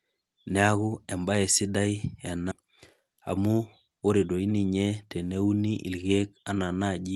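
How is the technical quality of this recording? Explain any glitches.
The recording has three audible glitches: a jump forward, a stretch that runs fast, and a single click. The call codec's coding noise and a top end that stops around 12 kHz are audible throughout.

At 2.51 to 2.53 s there is a skip ahead. About 0.7 s of audio was discarded while later audio was already queued, and the two sides were spliced together with no silence or filler. The speech jumps abruptly mid-flow. Unlike a dropout or concealed packet loss, nothing replaces the missing part. The sound simply resumes further on, as if edited.

From 2.61 to 4.03 s there is a jitter buffer speed-up. The receiver held more audio than it wanted and trimmed short pitch-period pieces repeatedly, removing roughly a tenth of a second in total. The speech plays at about 107% speed and sounds slightly hurried. Pitch stays unchanged, which distinguishes this from a sample-rate mismatch, where speed and pitch rise together.

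At 6.5 s there is a single sharp click from dropped samples, likely about one sample missing from the stream, so the waveform steps abruptly to a later value. It shows as a thin vertical line across the spectrum. No sound is lost, which separates it from the skip ahead. It also differs from digital clipping, which distorts loud peaks rather than producing one isolated tick.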